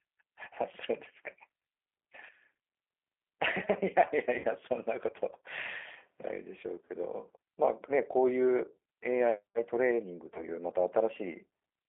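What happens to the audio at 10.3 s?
At 10.34 s the audio hits VoIP packet loss concealed by the speech codec. About 20 ms of audio is missing, which fits a single lost packet, and the effects last until about 10.42 s. The decoder fills the gap by repeating its last pitch period and vocal-tract filter at falling gain, so the sound briefly smears into a buzzy tone or coloured noise that fades. Because each frame builds on the previous one, the sound stays weak and distorted for the remaining tens of milliseconds until the decoder recovers. On a spectrogram, this shows as a short stretch of frozen, evenly spaced harmonics that fade, then a dimmer patch before normal texture returns. On the waveform, repeated identical cycles shrink in amplitude.

All of this sits on top of the G.729 codec, which is present throughout. At 8 kbit/s it rebuilds the sound from a filter, a pitch predictor and a few pulses per frame, and the line band runs from 300 Hz to 3.4 kHz. 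The result is plainly audible roughness and a synthetic edge. A spectrogram shows nothing above about 3.4 kHz and a thinned, grainy harmonic structure below it.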